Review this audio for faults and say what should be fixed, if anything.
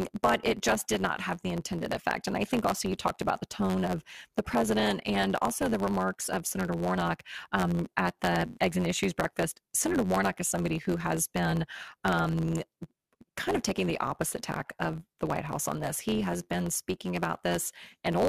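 Throughout the speech there is a block size mismatch (truncated). One stage writes longer blocks than the next reads, and the tail of each block is discarded. The result is a steady buzz at 91.9 Hz, the block rate, which fits a 512-sample write size. The audio also runs 1.07 times fast while keeping its timbre. A resampling error would shift pitch and timbre along with speed, so the unchanged timbre points to truncation instead. Prevent it by making the producer and consumer agree on block length, or by buffering between them so that no samples are dropped.

From 8.48 to 8.59 s there is AAC frame loss with concealment. About 85 ms of coded audio went missing, which fits four lost frames, and the decoder filled the gap by extrapolating from the last good spectrum. What you hear is a brief smeared, noisy patch rather than silence. A plain dropout would leave a hard gap with clicks at its edges, while concealment keeps the gap filled with spectrally plausible sound. 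Prevent it with a more reliable transport, or with error protection or retransmission for the coded stream.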